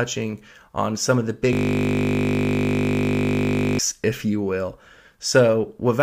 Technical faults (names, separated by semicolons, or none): system hang loop